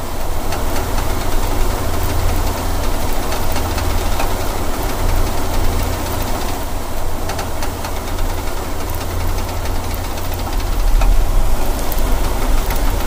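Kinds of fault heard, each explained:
Repeated frames: short compressed blocks play again, heard as two stutters. First a 48 ms block sounds three times; later a 96 ms block sounds twice.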